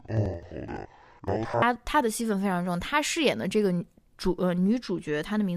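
From 0.0 to 1.66 s, interleaved audio read as planar: half-speed block halves play together, an octave low; spectrogram harmonics halve, with 85-ms seams.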